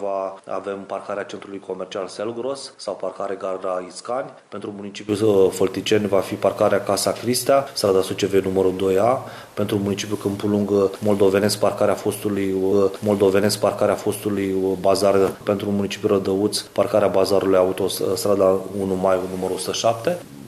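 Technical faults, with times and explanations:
0.00–5.09 s, input switched to a poorer device: the sound is dull, with nothing above 10.5 kHz, roughly 10 dB quieter, and carries faint added noise, likely from a narrower-band microphone. A spectrogram shows an empty top band ending abruptly at 5.09 s; the waveform grows taller there, with no gap.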